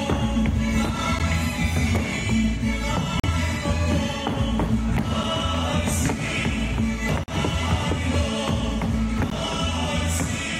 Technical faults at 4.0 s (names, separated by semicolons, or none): none